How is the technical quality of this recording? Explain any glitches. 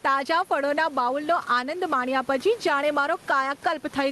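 The recording suffers from gain pumping for its entire length. The gain swings by around 10 dB, pulled down whenever the speech gets loud. The speech ends up squashed, with loud and soft passages pressed close together in level. The likely cause is microphone gain set far too high, with a fast limiter or compressor pulling the level down on every peak and letting it rise again in the gaps. The room noise sits about 31 dB below the speech. The highs stop near 12 kHz, which fits a call codec running at a modest bitrate.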